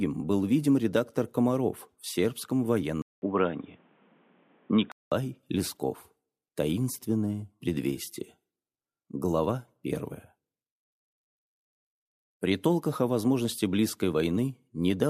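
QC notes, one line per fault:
3.02 to 5.12 s, input switched to a poorer device: a gap of about 200 ms opens at 3.02 s, then the sound turns dull and boxy, with nothing above 3.8 kHz. A new background noise sits roughly 35 dB below the signal. Loudness stays about the same. At 5.12 s the full band returns. The cause is likely a mid-recording change of input to a narrower-band microphone or a headset call profile, with its own tone and noise.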